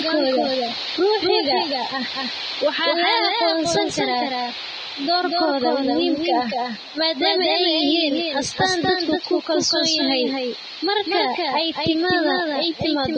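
From start to finish the speech carries a doubled audio track: a second full-band copy trails about a fifth of a second behind, only a few dB quieter. Unlike an echo or reverb, it has no decay or room colour, so it sounds like two clean, staggered takes, most likely a second capture path running late.

Also throughout, heavy Vorbis compression leaves nothing above 9.6 kHz and turns the treble grainy and hissy, with roughened tones and smeared consonant attacks. The hiss rises and falls with the speech rather than sitting steady like background noise, which points to a low bitrate of roughly 20 kbps.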